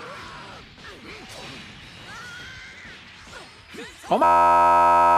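At 4.24 s a system hang loop begins and continues to the end of the clip at 5.18 s. The machine stalled while the playback hardware kept reading the same ring buffer, so one 11.61 ms slice of audio repeats exactly, about 80 times. At that length the repetition fuses into a steady buzz at 86.1 Hz rather than a stutter. The loop length fits a 512-sample buffer, and roughly a second of real audio is missing.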